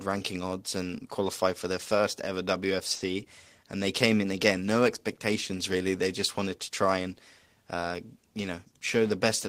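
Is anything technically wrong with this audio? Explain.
Yes, there are two timing faults in this speech.

From 2.95 to 3.02 s one sound is held unnaturally long, with a slight buzz or dip. This is a short stall from a late packet: the jitter buffer ran dry, so the receiver stretched the last sound by 50 ms and then resumed without losing anything.

From 8.52 to 8.82 s the speech sounds hurried, running at 112% speed without any change in pitch. This is a jitter buffer speed-up: to shrink excess delay, the receiver cut out short pitch-period pieces, around 50 ms in total.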